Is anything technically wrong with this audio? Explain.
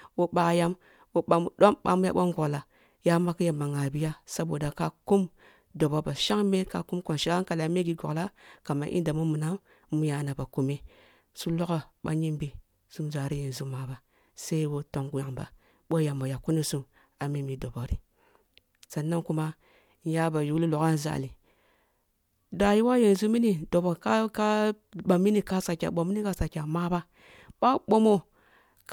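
No, nothing technically wrong here.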